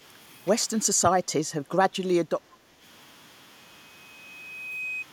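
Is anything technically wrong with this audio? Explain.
Yes. Speech suppressed in double talk, likely from an echo canceller turning down both sides at once, dips the speech by up to about 10 dB at 0.93 to 1.29 s, and by about 5 dB at 1.47 to 1.93 s and 2.23 to 2.83 s, leaving it briefly quieter and patchy.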